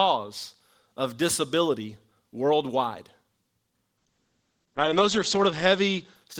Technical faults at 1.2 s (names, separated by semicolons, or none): none